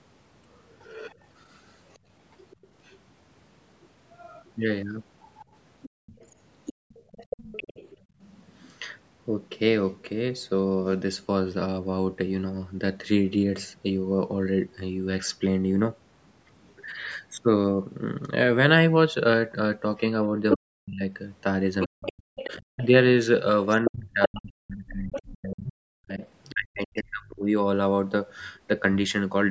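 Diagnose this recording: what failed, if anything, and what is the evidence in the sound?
The other side's voice leaking through is the first problem, and it's in the call processing stage. A second voice runs under the talker from 0.8 to 7.97 s at about 20 dB down, then pops up at 20.5 to 20.58 s at roughly equal level, 21.8 to 22.86 s (about 10 dB down), 23.85 to 25.31 s (about 5 dB down) and faintly at 26.23 to 26.51 s. The likely cause is a loudspeaker the echo canceller didn't fully cancel.

There's also background gated by the echo canceller between 5.89 and 8.21 s. The room tone ducks, by about 31 dB at its deepest, for well under a second in total. It comes back once the canceller releases. That's the suppressor clamping the mic while the far end was playing.

Speech suppressed in double talk shows up from 20.32 to 22.94 s and again from 23.85 to 27.48 s, right where those later leaks overlap the talker. 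The talker's voice dips hard, around 40 dB at worst, for about a second and then about three seconds in all. The canceller likely couldn't tell near speech from echo and squashed both.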